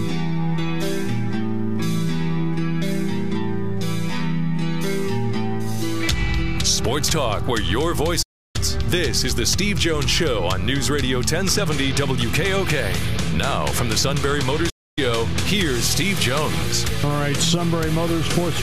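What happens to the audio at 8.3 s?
A playback stall hits here. The sound cuts out at 8.22 s and stays silent until 8.56 s, a gap of about 320 ms. It stops in mid-flow rather than fading, so the break is abrupt and clearly audible. The cause is likely the player running short of data, or its thread being blocked, so the output starved until it could recover.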